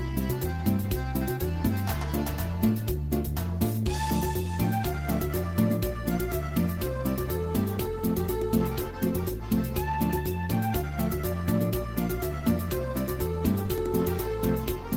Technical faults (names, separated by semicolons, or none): none